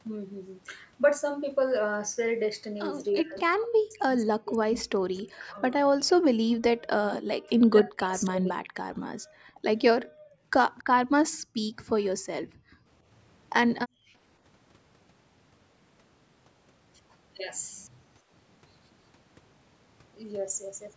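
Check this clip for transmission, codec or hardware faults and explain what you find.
Three echo-canceller faults appear in the speech: two passages of suppressed talk, five brief background dropouts, and one faint echo.

Speech suppressed in double talk, 3.15 to 6.33 s and 6.97 to 8.72 s: the talker's voice dips by roughly 40 dB in pieces, about two seconds and one second in total. The likely cause is the echo canceller misreading simultaneous talk as echo and attenuating both. Unlike background gating, the voice itself is cut.

Background gated by the echo canceller, at 9.17 to 9.62, 10.02 to 10.43, 11.3 to 11.58, 12.44 to 12.91 and 13.87 to 14.13 s: the room sound drops by about 40 dB (about 38 dB in the second) for 0.3 to 0.5 s. The canceller is clamping the microphone during loudspeaker playback. Here the room tone vanishes and returns, rather than speech being chopped.

Echo leak, 10.78 to 10.84 s: a faint, separate copy of the voice arrives 277 ms late, about 30 dB below the speech. 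The likely cause is loudspeaker pickup the canceller failed to remove. The delay is distinct, unlike the diffuse tail of room reverberation. The 8 kHz upper limit from the call microphone processing is expected, not a fault.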